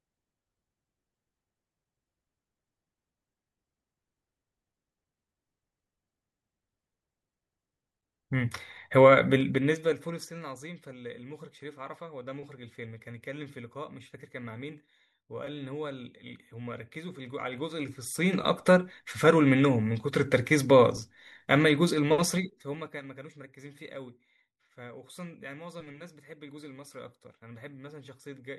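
Speech clip with zipper noise during three level moves, at 9.32–10.33 s (down about 20 dB), 17.13–18.69 s (up about 20 dB) and 22.19–23.04 s (down about 20 dB). Gain jumps in unsmoothed 3 dB steps, roughly four to seven per second, each step clicking audibly.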